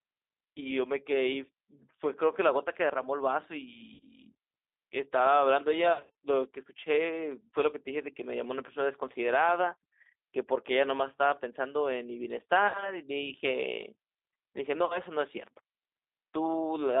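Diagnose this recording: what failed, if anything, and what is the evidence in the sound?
G.729 codec, throughout: a codec-stage fault. The speech is confined to about 300 Hz to 3.7 kHz and sounds rough and synthetic, as the 8 kbit/s coder rebuilds it from a filter, pitch and sparse pulses.

VoIP packet loss concealed by the speech codec, a network-stage fault, at 3.94–4.05, 5.93–6.25, 12.68–12.97 and 14.85–14.99 s. The speech is stretched into a buzzy tone or coloured noise that fades as the decoder extrapolates across missing frames.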